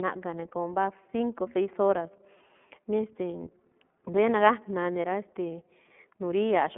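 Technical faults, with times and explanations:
Throughout, iLBC codec: the speech is confined to a telephone band of about 200 Hz to 3.4 kHz, with nothing above 3.8 kHz. It has a plainly audible rough, synthetic edge because each 30 ms frame's excitation is coded independently, which fits iLBC's 13.33 kbps mode.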